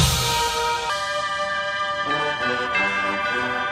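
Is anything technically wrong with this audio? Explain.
Yes. From 0.90 s to the end at 3.71 s there is a section at the wrong speed, likely from being played against the wrong clock so it runs 1.27 times too fast. Pitch and tempo rise together by roughly four semitones, making the sound higher and hurried.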